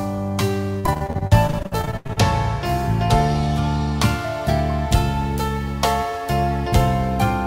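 From about 0.79 to 2.18 s there's repeated packet loss, giving that robotic sound: close to twenty short dropouts, the longest around 82 ms, each papered over by stretching the previous sound. Roughly 40% of that stretch is patched, so it comes across choppy, with pieces missing.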